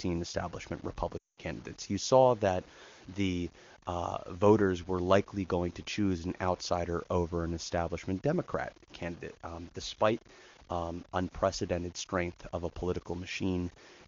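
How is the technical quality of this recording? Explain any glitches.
The recording has two audible faults: a grainy distortion that runs through the entire speech clip, and a short dropout early on.

Low bit depth without dither, present throughout: quiet stretches sound gritty and the softest tails break up. The error follows the sound instead of sitting underneath as a steady hiss. The likely cause is truncation to very few levels, which fits 8-bit samples, leaving the distortion roughly 25 dB below the signal.

Lost AMR speech frames, 1.17 to 1.41 s: for about 200 ms the decoder received nothing usable, which fits ten 20 ms frames. It kept reusing the last good pitch and vocal tract settings at falling gain, so the sound drops to near silence within two frames before returning weakly. The wideband AMR coding at 23.85 kbit/s is clear on either side of the gap.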